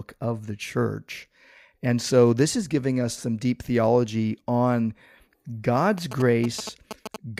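From 5.98 s to 7.16 s, GSM signalling bursts break into the speech as a galloping dit-dit-dit of short buzzes. A nearby 2G phone was signalling to its network, and the audio circuitry rectified its radio bursts into sound. The buzz repeats at about 217 Hz and sits roughly 10 dB below the speech. Unlike steady mains hum at 50 or 60 Hz, it arrives in rhythmic on-off clusters.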